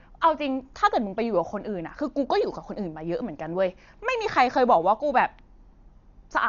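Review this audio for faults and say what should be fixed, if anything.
Dolby Digital compression, running the whole clip: the speech sounds heavily dull, with nothing above 7 kHz, and a rough, fluttering noise clings to the voiced sounds. This is likely AC-3 coding at a very low bitrate, with the damage pointing to around 48 kbps. Starved of bits, the encoder cut the band and left many frequency lines without mantissa data, so the decoder filled them with dither noise that wobbles around each tone. To prevent it, encode from the original source at a much higher bitrate, or deliver the speech in an uncompressed format.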